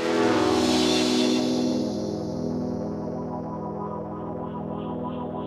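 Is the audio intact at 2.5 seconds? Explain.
Yes, the audio is intact at 2.5 seconds, with no dropout, click or other fault audible at that point.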